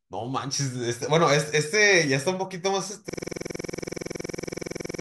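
A system hang loop begins at 3.09 s and runs to the end of the speech clip. The computer or driver stalled while the audio hardware kept replaying the same ring buffer, so one 46 ms slice repeats exactly 41 times. That length fits a 2048-sample buffer. At 21.5 repeats per second it lands between a buzz and a stutter, a rapid, rough, machine-like rattle with a fixed pitch where the speech should continue.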